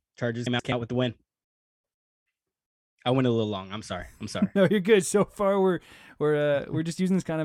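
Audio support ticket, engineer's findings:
Frames out of order, 0.46–0.72 s, before "with the win": two adjacent 128 ms runs decoded swapped. Garbled flutter, no time lost. Likely jitter-buffer reordering.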